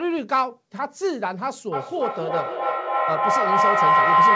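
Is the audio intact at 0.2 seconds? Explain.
Yes, the speech at 0.2 s is intact, with no fault at that moment beyond the ordinary band limit of a wideband call codec, which leaves nothing above 8 kHz.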